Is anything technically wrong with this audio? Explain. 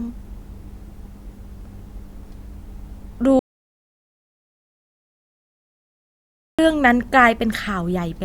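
Yes. An audio dropout to silence runs from 3.39 to 6.59 s. The input signal was likely lost while recording carried on writing silence. Speech cuts off abruptly into dead silence with no room tone, and about 3.2 s is missing before it resumes mid-flow.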